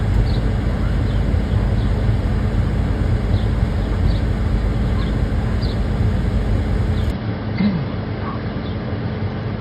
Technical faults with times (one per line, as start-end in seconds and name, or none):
7.11-9.61 input switched to a poorer device